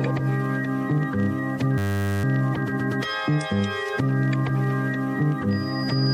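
At 1.78 s the audio locks into a system hang loop. It lasts until 2.24 s. The system stalled while the sound hardware kept replaying the same stretch of its ring buffer. That stretch is only 10 ms long. It repeats at 100 Hz, about 46 times over. A loop this short does not stutter. It fuses into a steady, hard buzz at 100 Hz. Little or no audio seems to be lost afterwards.

From 5.51 s a loudspeaker feedback squeal takes over and runs to the end of the clip. A microphone is picking up the speaker it feeds. At about 4.9 kHz the loop gain goes above one. That tone feeds on itself and swells steadily for roughly the last 0.7 s. It is a single piercing whistle. It ends up a few decibels louder than the rest of the sound.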